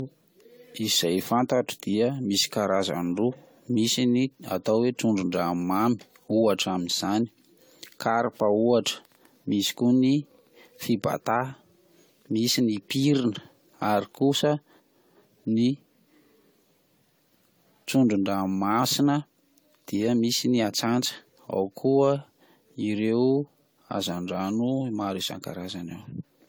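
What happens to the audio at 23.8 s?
At 23.8 s the speech has the same swirly, smeared, hollow quality heard across the whole clip, with blurred attacks. This is generation loss, likely from about ten successive lossy encodes, in a way that fits AAC-LC at around 96 kbit/s. Each re-encode quantises on a shifted frame grid, so noise and spectral holes pile up. A spectrogram shows patchy, flickering gaps and smeared onsets below a ceiling near 20 kHz, and the waveform's transients look softened.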